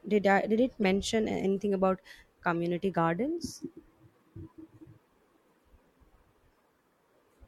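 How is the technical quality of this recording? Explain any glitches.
Two short glitches mar the recording, both from a corrupt frame being decoded. At 0.82–0.85 s, between "did I did it" and "anything about", flipped bits in about two frames made the decoder misplace energy in frequency, giving an error peaking near -20 dBFS. At 2.53–2.56 s, after "anything about", a single damaged frame yields a faint error around -45 dBFS. Unlike a dropout, these add wrong-frequency sound rather than a gap.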